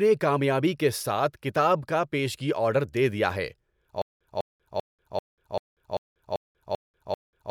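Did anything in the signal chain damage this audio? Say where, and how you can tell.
Yes. At 4.02 s, after "آرڈر دے دیا ہے", a 200 ms burst repeats to the end, split by 190 ms silences. This stutter with silent gaps likely comes from a stalled playback buffer.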